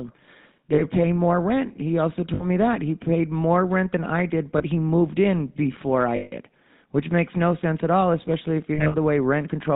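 Speech carried through the GSM full-rate codec at 13 kbps, with the buzzy, gravelly grain of that codec plainly audible throughout. The codec models the vocal tract and excites it with a sparse, regularly spaced pulse train, which produces this rough texture, and it passes nothing above 4 kHz. That rasp is what separates it from a simple low-pass filter, which would dull the sound without roughening it. Lost GSM frames break in at five points: 0.74 to 0.82 s (40 ms, fitting two 20 ms frames), 2.34 to 2.46 s (60 ms), 4.58 to 4.64 s (20 ms, between "rent than I did" and "he moved in before"), 6.16 to 6.33 s (160 ms, between "he moved in before" and "which makes no sense"), and 8.74 to 8.96 s, where about 140 ms of losses are scattered over 200 ms, the longest run roughly 70 ms, just after "all especially if you". These are not silent dropouts. The decoder reuses the last good frame's settings, so each gap is filled with a held, metallic ring.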